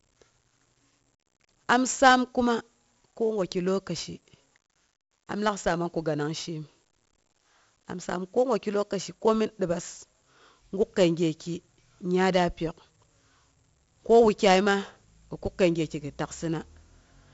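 Speech was passed through 4-bit ADPCM compression throughout, with nothing above 7.7 kHz, which fits a 64 kbps stream, leaving heavy gritty hiss on loud passages, distorted attacks and a dull tone.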